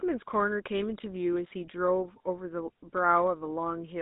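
Speech, and the whole thing sounds like it's come through the GSM full-rate codec. That coder models the vocal tract and excites it with a sparse, regularly spaced pulse train, so the speech carries a gravelly buzz from start to finish, and the damage is plainly audible. The band sits at roughly 200 Hz to 3.7 kHz, with nothing on top, which fits a 13 kbps full-rate phone channel.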